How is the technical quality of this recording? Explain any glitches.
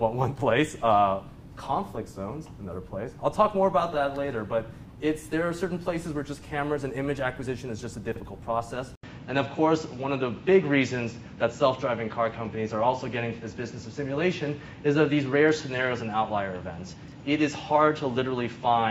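The recording has two glitches, chunk reordering that happens twice and a drop in quality partway through.

Chunks out of order, at 8.12 to 8.2 s and 16.96 to 17.12 s: 40 ms blocks were written late, one block late the first time and three the second. The sound jumps out of sequence and back, giving a brief jumbled moment.

Input switched to a poorer device, at 8.95 s: after an 80 ms silence, the sound turns duller and boxier for the rest of the clip. Nothing is heard above 7.6 kHz, the level shifts by around 5 dB, and a new, faint background noise appears. The likely cause is the system changing to a different microphone or a headset's call profile.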